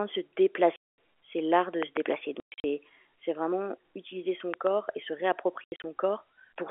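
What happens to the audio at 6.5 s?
Nothing goes wrong at 6.5 s: the speech there is intact, carried through the G.711 telephone coding with its usual narrow line band of roughly 300 Hz to 3.4 kHz.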